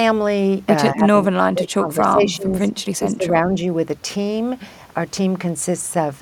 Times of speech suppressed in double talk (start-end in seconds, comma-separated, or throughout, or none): 0.93-3.50